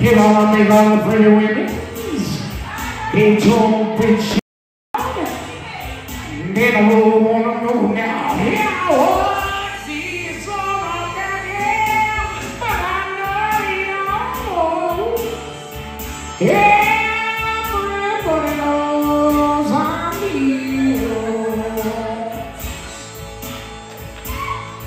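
From 4.39 to 4.94 s the sound cuts to complete silence, with no room tone: an audio dropout to silence, likely a brief input loss.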